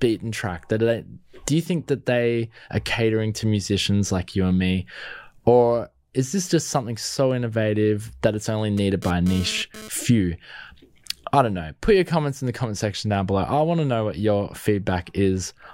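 A speech recording, interrupted from 8.77 to 9.89 s, right after "innovative that it's only", by a hard, raspy buzz sitting about 15 dB below the speech, pitched at roughly 217 Hz and thick with harmonics that have nothing to do with the talking. This is GSM phone buzz: a nearby 2G handset transmitting in short bursts, here during a data transfer, so the interference flares for about a second, and the audio circuitry rectifies those radio pulses into audible sound.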